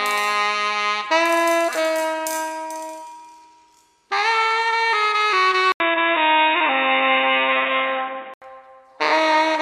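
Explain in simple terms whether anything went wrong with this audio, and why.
Something does go wrong here. At about 5.72 s the sound briefly drops out for about 80 ms, then comes back noticeably duller and boxier, with a faint new hiss underneath but roughly the same loudness. Nothing above about 3.8 kHz gets through until 8.42 s, when the clarity returns. That pattern points to an input switched to a poorer device, likely the recording jumping to a lower-quality microphone or headset for those few seconds.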